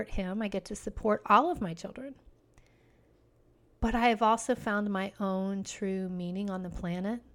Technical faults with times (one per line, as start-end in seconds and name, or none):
5.70-7.34 mains hum